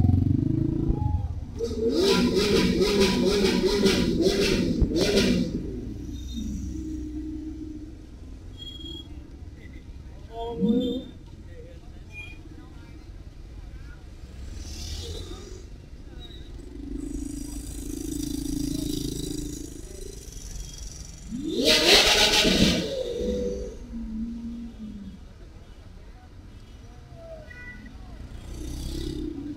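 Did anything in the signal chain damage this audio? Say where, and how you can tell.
Yes. Loud pops: a voltage step, likely from a connector, switch or static discharge in the analogue wiring, was added to the signal. One pop at 0.89 to 0.92 s peaks about 10 dB above the sound. Two more, from 4.82 to 5.05 s, reach about 15 dB, with the sound continuing underneath.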